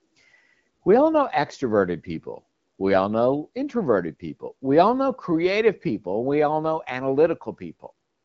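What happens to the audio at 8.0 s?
Nothing goes wrong at 8.0 s: the speech carries on intact through the AMR wideband (HD Voice) codec, whose band limit sits around 7.6 kHz.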